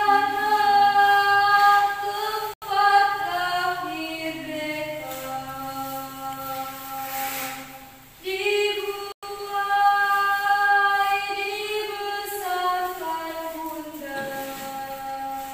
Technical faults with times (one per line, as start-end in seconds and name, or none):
2.54-2.62 Bluetooth stall
9.12-9.23 Bluetooth stall